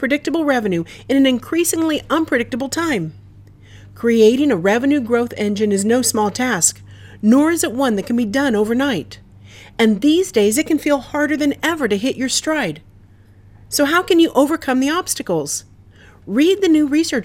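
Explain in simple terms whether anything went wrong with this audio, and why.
Weak digital radio reception let corrupted data slip past error correction and scramble a few frequency bands: DAB burbling, a brief burble from 6.64 to 6.70 s.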